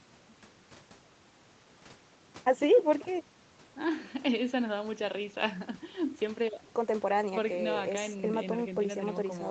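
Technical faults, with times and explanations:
Nothing stood out on listening; the speech carries the narrowed top end of a call path, with nothing audible above about 8 kHz.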